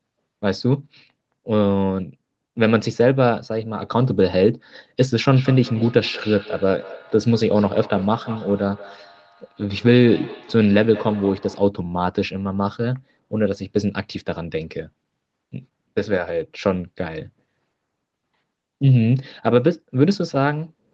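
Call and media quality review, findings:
Feedback echo between two devices, 5.35–11.73 s. Speech returns about every fifth of a second, thinner and ringing, peaking about 17 dB below direct speech. A second device's playback is re-captured by the other device's microphone.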